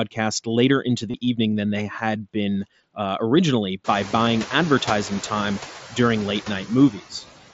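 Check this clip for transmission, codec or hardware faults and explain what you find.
Three faults are present: noise suppressor artifacts, concealed Bluetooth headset packet loss, and speech cut by the noise suppressor.

Noise suppressor artifacts run through the whole clip. The suppressor pulls down bands it judges to be steady noise, frame by frame, by about 14 dB. The background dips between phrases and swells back under speech. This is most noticeable after the room noise rises sharply around 4 s.

Concealed Bluetooth headset packet loss occurs three times. From 1.11 to 1.14 s, 30 ms is missing between "later into" and "evening than they had". That fits several consecutive lost frames. The receiver fills the gap by repeating a recent stretch of waveform. It gives a brief buzzy hold with a slight warble as real audio returns.

Two shorter losses of 7.5 ms each fall at 4.26 s, between "been uh originally by" and "advertising time", and at 6.30 s. 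Each fits a single lost frame. Concealment leaves these nearly hidden.

Speech cut by the noise suppressor appears from 6.91 to 7.23 s. The suppressor mistakes parts of the speech for noise and lowers them by up to about 9 dB. This affects around a tenth of a second in total. The affected speech there sounds swallowed and faint.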